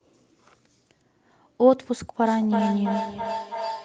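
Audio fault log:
2.24–3.85 s feedback howl: a tone near 1 kHz builds under the speech, pulsing roughly every third of a second and peaking about 8 dB below it. Sound loops from loudspeaker back into microphone, gaining level each pass and narrowing to one frequency.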